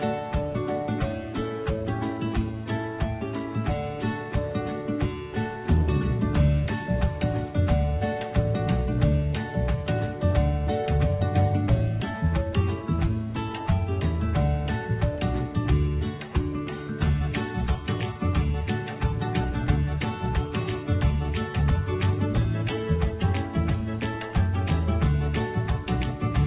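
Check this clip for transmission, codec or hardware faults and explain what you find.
No transmission, codec or hardware faults turn up anywhere in this clip. The audio carries the narrowband sound of a working call path, with nothing above 4 kHz, which fits G.711 A-law at 64 kbps.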